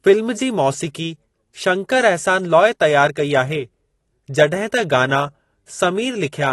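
Speech running the whole way through carries plainly audible AAC compression, likely from a low-bitrate AAC-LC encode near 32 kbps, sounding dull and smeared with a warbly, fizzy edge on sibilants. A spectrogram shows nothing above 12 kHz.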